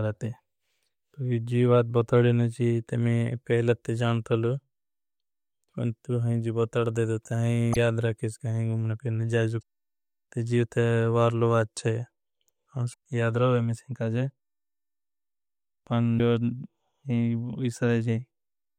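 Speech, with damaged data in the compressed stream at four points: 7.72 to 7.77 s, 9.59 to 9.63 s, 12.90 to 12.94 s, and 16.17 to 16.20 s. Each lasts about 35 to 50 ms. The decoder misreads corrupted frames, loses sync and hunts for the next header. A brief chirp or blip results.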